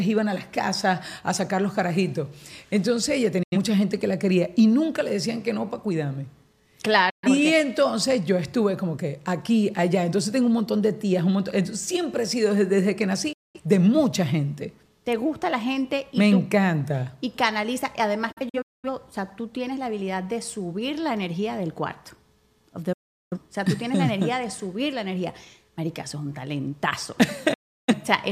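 Digital broadcast dropout breaks up the audio six times. Each time the sound fades out over about 8 ms and goes silent. The holes start at 3.43, 7.10, 13.33, 18.32, 22.93 and 27.53 s. They last 85, 128, 213, 299, 384 and 341 ms. At 18.32 s the silence comes as several short gaps spread over 512 ms, the longest 213 ms. The receiver lost valid frames and muted until they returned. Whatever was sent during the gaps is gone.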